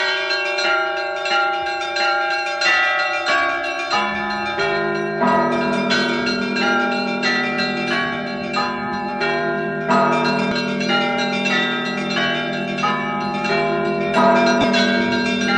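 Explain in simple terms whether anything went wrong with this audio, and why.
Near the end, from 14.61 to 14.64 s, the sound briefly turns into a noisy smear instead of dropping out. These are lost LE Audio frames: about 22.5 ms of wireless Bluetooth data, roughly three frames, never arrived, so the receiver filled the gap with a scrambled copy of the sound just before.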